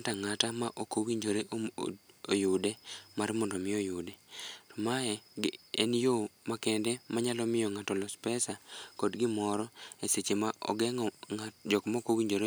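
No technical faults are audible.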